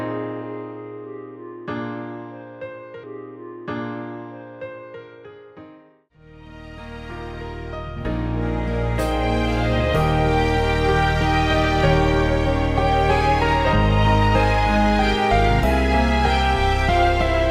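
Two seconds of the audio play twice. At 5.03 s the stream jumps back and replays the stretch that began at 3.03 s, with a small blip at the join, and everything after it arrives two seconds late. This is a stream segment repeated fault: the player fetched or queued the same chunk of the stream a second time and played it again instead of moving on to the next one.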